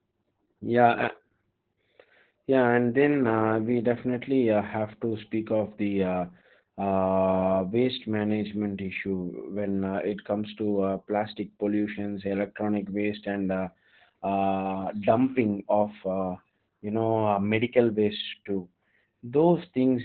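Opus voice compression runs through the whole clip. The speech has nothing above about 4.3 kHz and a coarsely coded excitation, which fits SILK narrowband at around 8 kbps. Heavy codec damage leaves the speech muffled, hoarse and slightly robotic.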